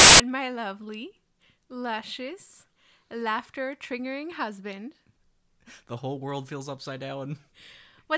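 A sudden very loud burst of white noise with hard edges fills 0 to 0.20 s: file tags played as audio, an embedded cover picture decoded as audio samples.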